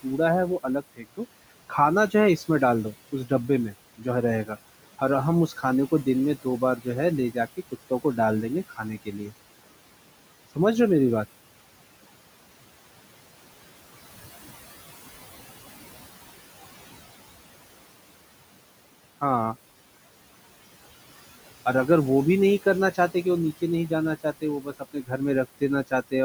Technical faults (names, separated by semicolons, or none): noise suppressor artifacts; speech cut by the noise suppressor